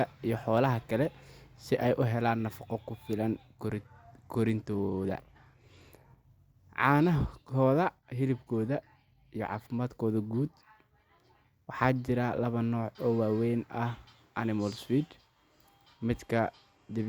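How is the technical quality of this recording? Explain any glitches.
The recording has two glitches of the same kind. A Bluetooth SBC bit pool drop occurs from 3.66 to 6.10 s, just after "helaan nafaqo ku filan", and again from 16.13 to 17.08 s. A congested link forced the encoder to spend fewer bits, which fits a bit pool falling from 31 to 15, near 105 kbps. The top sub-bands starve and the rest are coarsely quantised, so the speech dulls and turns gritty until the rate recovers.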